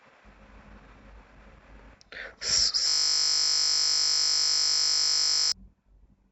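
From 2.88 to 5.52 s the speech locks into a system hang loop: the machine or driver stalled while the sound hardware kept replaying one 20 ms stretch of its ring buffer. Repeating that tiny slice at 50 Hz turns it into a steady, flat buzz rather than a stutter, and around three seconds of speech never arrives. Unlike a dropout, which goes silent, the loop keeps sounding, identical on every cycle, until playback snaps back.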